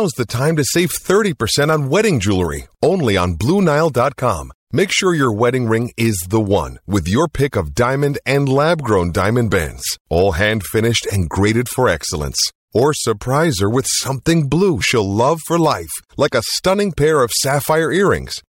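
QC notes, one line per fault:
7.75 s, pre-echo: a short hiss creeps in about 16 ms ahead of a sharp attack, rising about 17 dB, so the hit sounds softened. The codec spread its noise across the whole block, which fits a 26 ms window with no switch to short blocks.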